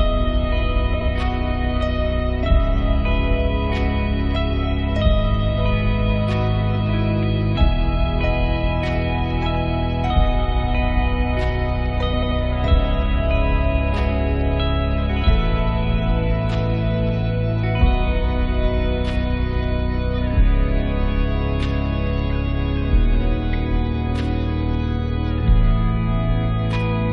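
Frames out of order at 0.94–1.09 s and 12.13–12.32 s: adjacent blocks of about 70 ms, then 93 ms, play swapped, giving a garbled flutter.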